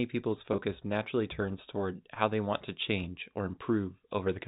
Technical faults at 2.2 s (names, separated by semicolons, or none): packet loss with pitch repetition